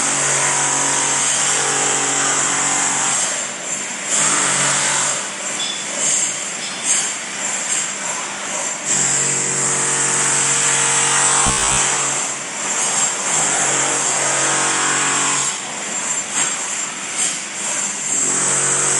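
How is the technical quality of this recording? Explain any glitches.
The recording has one glitch. Robotic sound from repeated short buffers appears from 11.47 to 11.78 s. Audio likely arrived too slowly there, so playback looped a roughly 15 ms slice for most of that stretch, forcing a rigid, metallic buzz at 66.8 Hz onto the sound.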